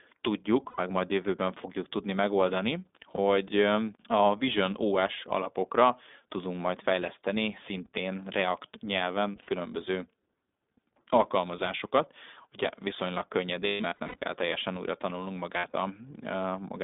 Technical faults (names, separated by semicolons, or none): iLBC codec; lost iLBC frames